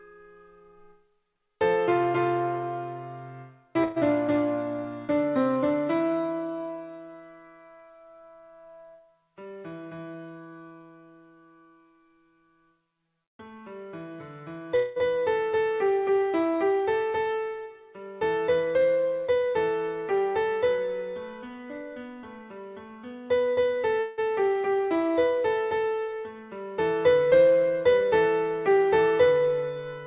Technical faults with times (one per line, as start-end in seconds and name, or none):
3.84-3.98 burst of packet loss
14.76-14.98 long network dropout
24.00-24.19 long network dropout